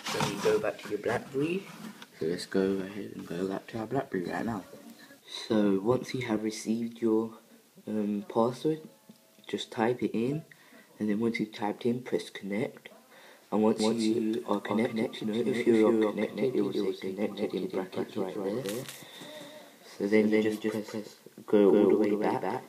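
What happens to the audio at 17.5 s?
At 17.5 s you're hearing a doubled audio track: from 13.8 s right to the end, a second full-band copy trails the original by about a fifth of a second, roughly 5 dB quieter, with no decay or room colour. It likely comes from a slower capture path or two misaligned copies in an edit.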